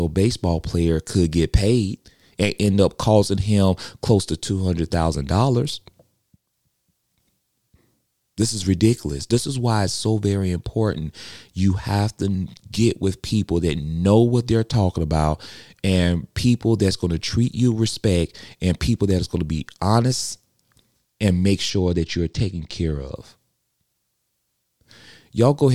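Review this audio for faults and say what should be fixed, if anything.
From 21.70 to 23.16 s, just after "and make", the speech turns dull, its top end thinned. This is channel delay (comb filtering): one channel lags by about two samples, so the mono sum cancels fixed notches starting around 10 kHz. Keep both channels sample-aligned and check the mono fold-down for timing offsets before summing.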